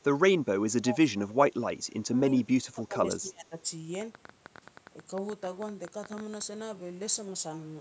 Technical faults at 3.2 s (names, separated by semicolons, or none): speech suppressed in double talk